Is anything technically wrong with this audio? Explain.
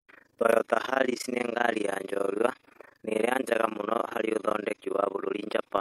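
Yes, two things. The first runs through the whole speech clip: overlap-add ripple. The audio looks to have been chopped into windowed frames and stitched back together with an overlap whose windows don't add up to a flat gain, so the level swells and dips once per frame, around 30 times a second. The dips are deep, about 60 dB, so rather than a gentle wobble you get a harsh, fast flutter or rough tremolo riding on everything.

The second is a one-off overlap between stream segments, from 0.53 to 0.55 s. Two chunks of the stream claimed overlapping time stamps, and the player trimmed away that overlap even though the audio there wasn't actually duplicated. Roughly 24 ms of real sound just disappears and the waveform jumps across the gap, which you hear as a small click or skip. The stream was cut into 2-second segments.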